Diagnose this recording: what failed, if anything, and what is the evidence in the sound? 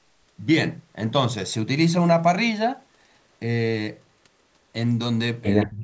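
At the call-processing stage, echo leak is audible from 5.61 to 5.66 s: a brief delayed copy of the speech arrives roughly 173 ms behind the original and sits about 10 dB below it. The likely cause is a far end on loudspeaker whose echo canceller left part of its microphone pickup unremoved, so a short residual fragment was transmitted back down the line.

Speech suppressed in double talk follows, from 5.65 s to the end of the clip at 5.83 s. For about a fifth of a second the talker's level collapses, dropping by roughly 40 dB at its deepest. This is likely the echo canceller failing to separate local speech from loudspeaker echo while both sides were active and attenuating everything. The call microphone processing itself is visible only as the band-limit at 8 kHz and the removal of the lowest bass.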